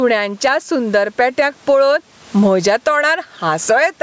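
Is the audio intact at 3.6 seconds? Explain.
No. Gain pumping runs throughout, so at 3.6 s the gain swings around 15 dB with loud speech, squashing loud and soft parts closer in level, likely a limiter fighting excessive gain, unlike room noise.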